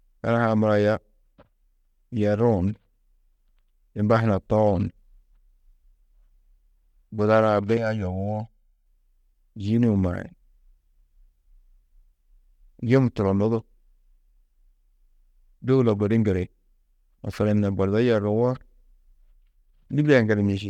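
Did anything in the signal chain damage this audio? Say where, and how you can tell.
Yes. From 7.77 to 8.86 s the speech turns hollow and phasey, with fixed notches starting around 400 Hz, the channel delay (comb filtering) signature. At the buffer stage, one channel ran roughly 1.5 ms late and was summed to mono, cancelling evenly spaced frequencies.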